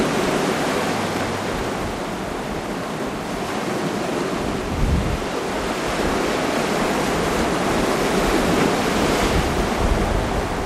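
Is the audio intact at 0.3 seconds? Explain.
Yes, the audio is intact at 0.3 seconds, with no fault present at that moment.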